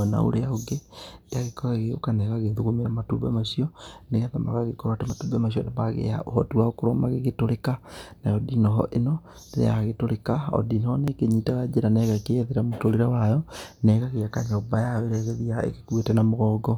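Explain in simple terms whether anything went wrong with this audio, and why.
The recording was likely handled in six-second chunks, with a tiny sliver of speech, around 20 milliseconds, lost at each handover. This audio missing between chunks causes brief skips at 5.1 s, after "macio nĩgetha magagĩkorwo atĩ", and at 11.08 s, after "o ndinoho nĩ".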